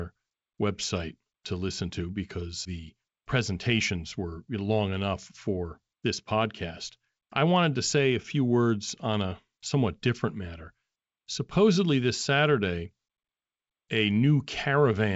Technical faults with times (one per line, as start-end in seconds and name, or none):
none